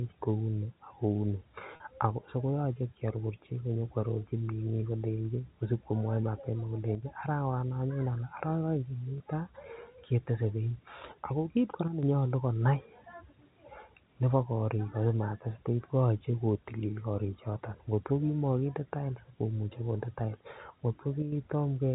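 Packet loss with pitch repetition: at 1.76 to 1.80 s, just before "so koyoche", about 40 ms dropped out, consistent with two lost packets, and again at 9.18 s for 20 ms. The receiver repeated the last pitch period to fill each gap, giving a brief held, buzzy tone.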